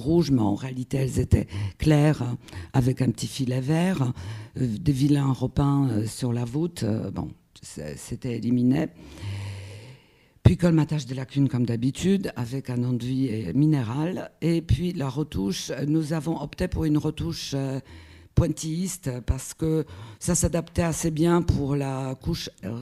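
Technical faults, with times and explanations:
Nothing technical goes wrong anywhere in this one, so there's no fault to point to.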